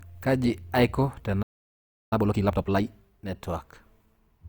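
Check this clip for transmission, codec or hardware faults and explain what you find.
Two faults show up in this speech, a stall followed immediately by a rushed recovery.

Playback stall, 1.42 to 2.13 s: the player likely ran short of buffered data, so the speech cuts to silence for about 0.69 s before resuming.

Time-compressed catch-up, 2.13 to 2.81 s: the player clears its backlog by splicing out small pieces, so speech runs at double speed at normal pitch.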